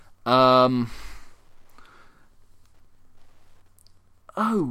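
Speech carries a faint, steady tick ten times a second throughout, far below it: Wi-Fi interference, a nearby radio's 102.4 ms beacon rectified by the audio circuit.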